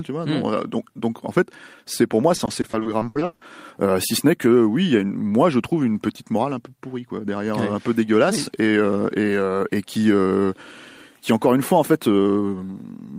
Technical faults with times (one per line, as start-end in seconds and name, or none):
2.35-3.43 repeated packet loss (robotic sound)